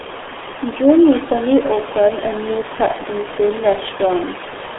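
From start to end, the speech is carried through the RealAudio 14.4 codec. It is an old dial-up speech coder, and the heavy damage fits a rate near 8 kbit/s. The band sits roughly between 300 Hz and 3.5 kHz. Nothing passes above 3.8 kHz. Consonants lose their edge, and vowels sound muffled and gargly. The room noise, about 11 dB below the speech, is squeezed through the same narrow band.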